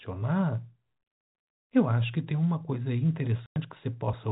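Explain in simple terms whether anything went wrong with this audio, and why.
Something did go wrong: the speech drops out twice with packet loss filled with silence. At 1.22 s the sound cuts to dead silence for 120 ms, and at 3.46 s it vanishes again for 100 ms. Chunks of audio never arrived over the network, and the receiver simply played nothing in their place. Both gaps fit whole multiples of 20 ms packets, and each starts and stops abruptly, all heard through narrow telephone-band G.711 coding.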